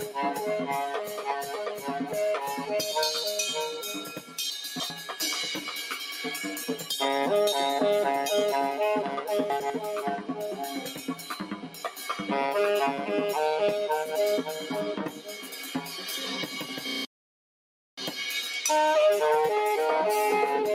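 A noise suppressor applied to music or sounds is active across the whole clip. It treats sustained, steady content as noise, so held material and decaying tails are pulled down while onsets survive. Level swings of around 10 dB make the sound pump and thin. On a waveform the envelope sags after each attack; on a spectrogram the sustained bands fade unevenly.

The sound is cut by the noise suppressor at 0.0–0.16 s (about 8 dB), 0.95–1.89 s (about 7 dB) and 4.08–4.38 s (about 7 dB). These dips show as shrunken waveform stretches and dimmed spectrogram regions after the attacks.

At 4.5–4.9 s there are chunks out of order. A 100 ms segment plays about 0.3 s after its proper place, producing a jumbled moment with hard joins. At 9.5–9.7 s a 100 ms segment plays one chunk late in the same way. Both show as vertical spectral lines at the splices and abrupt waveform discontinuities.

Further suppressor cuts follow at 10.97–11.3 s (about 6 dB), 11.53–11.99 s (about 7 dB) and 15.09–15.58 s (about 7 dB), each clipping sustain and decay.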